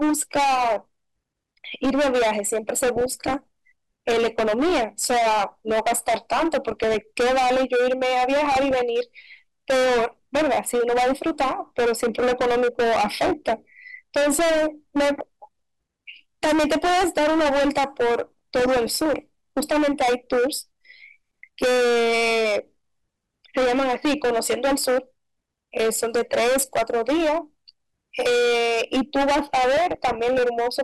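Right from the start the speech is hit by hard clipping, and it never lets up. The level has been pushed roughly 20 dB past what the chain can carry, so around a third of the waveform is sliced flat at the ceiling. Those squared-off tops throw harmonics high into the spectrum, and the result is a harsh fuzz sitting on basically every syllable rather than the odd crackle on peaks.

On top of that there are five bursts of DAB burbling: 2.96 to 3.43 s, 6.65 to 7.01 s, 8.52 to 8.80 s, 18.24 to 19.20 s, and 29.77 to 30.40 s. Weak reception is letting bit errors slip through the error correction into the MP2 stream, so corrupted samples put short blips of noise into individual sub-bands, and corrupted scale factors make sub-bands jump in level for up to a frame. You hear bubbling blips over the speech. The 18.24 s stretch is the longest.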